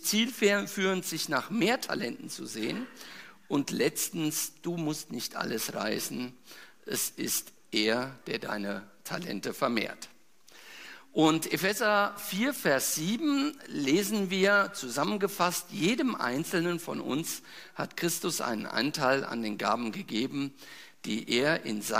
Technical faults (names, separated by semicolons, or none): none